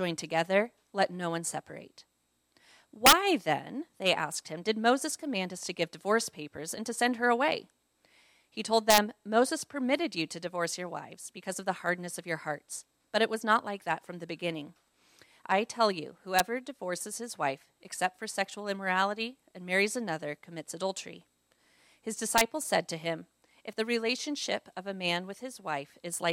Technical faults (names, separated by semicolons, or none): integer overflow